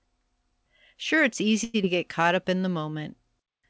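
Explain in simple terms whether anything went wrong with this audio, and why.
A short stall from a late packet happened at 1.64 s. One piece of the call arrived late, so the receiver ran out of sound to play and stretched the last bit for about a tenth of a second, until 1.76 s. Nothing is lost, but one sound is held too long, with a faint buzz or dip.

A short concealed packet loss follows at 1.82 s. About 40 milliseconds of audio never arrived in time. The receiver covered the gap briefly by continuing the previous sound, then skipped ahead to catch up, leaving a quick smear or wobble that ends by 1.85 s.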